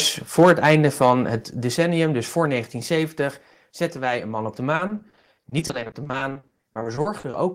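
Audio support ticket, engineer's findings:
Microphone overload, 0.38 to 1.12 s. Harsh crackle on the loudest syllables. Peaks flattened at converter full scale, about 5 dB over, affecting roughly 2% of samples. Likely cause: mic input gain set too high.

Microphone volume stepped down, 0.43 s and 1.44 s. Abrupt level drops, about 2 dB then about 5 dB, the second just before "decennium dus voor". The first falls within the clipped stretch, the second follows it. Likely cause: call software auto-reducing device input gain.

Repeated packet loss (robotic sound), 4.75 to 7.35 s, after "een man op de". Choppy texture with pieces missing. Many short holes, longest 40 ms, together 840 ms. About a third of the stretch is concealed by repetition. Likely network packet loss.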